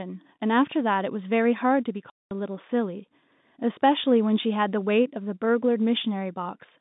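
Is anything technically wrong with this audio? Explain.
Yes. From 2.1 to 2.31 s the speech vanishes for 210 ms, fitting seven lost 30 ms packets. This is packet loss filled with silence: missing data replaced by nothing. The waveform shows a flat gap with abrupt edges; the spectrogram, a blank vertical band across the telephone-limited band.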